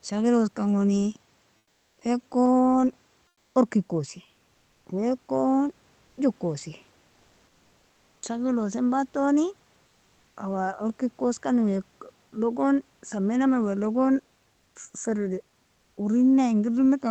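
Speech over a call path whose audio tops out around 8 kHz, with four pauses where the real room background, about 41 dB below the speech, drops out and is replaced by comfort noise: 1.57 to 2.01 s (440 ms, about 6 dB quieter), 3.27 to 3.55 s (280 ms, about 3 dB quieter), 4.51 to 4.85 s (340 ms, same level) and 14.53 to 14.75 s (220 ms, about 2 dB quieter). The likely cause is discontinuous transmission in an Opus-style codec, where the receiver synthesises noise while the sender is silent. What marks it out from a plain dropout or a noise gate is that the pause never goes truly silent. It fills with a steady, featureless hiss that is smoother than the real room sound, and the background detail returns abruptly when speech resumes.

At 1.99 s the onset is clipped by the voice detector. About 20 ms of the sound's start is missing, so it begins hard and without its soft lead-in, likely because the detector reacted late as the first comfort-noise stretch ended. 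Unlike a dropout inside running speech, the loss falls only at the very start of a sound and sits right at the boundary where the comfort noise hands back to real audio.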